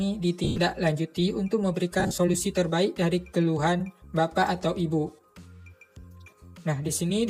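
Lost LE Audio frames made the LC3 decoder fill gaps with the last spectrum under random signs: at 0.44 to 0.58 s, mostly one long run, and 2.00 to 2.18 s, scattered dropouts, each about 120 ms of smeared, noisy sound, plus one brief 10 ms blur at 5.08 s.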